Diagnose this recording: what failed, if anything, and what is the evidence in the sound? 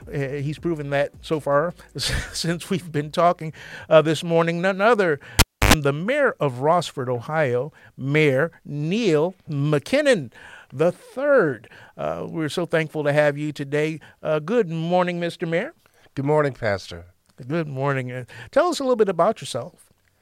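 Analogue wiring failed: a cable pulled and plugged in. At 5.39 s a pop cuts the sound to near silence for about 294 ms. A 50 Hz mains buzz sounds for about 92 ms within that gap as the plug tip touches. A second pop restores the audio at 5.74 s.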